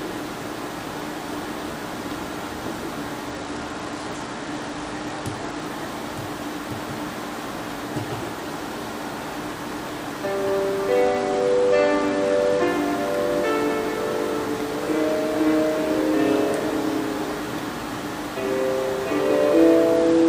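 Treble dulls and a gritty grain rises from 3.27 to 5.65 s, 11.02 to 12.67 s, and 19.96 s to the end: a Bluetooth SBC bit pool drop. Starved of bits, upper sub-bands vanish and the rest are coarsely quantised, which fits a bit pool near 12, about 88 kbps.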